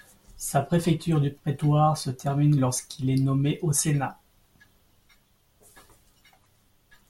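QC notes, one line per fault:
No faults detected.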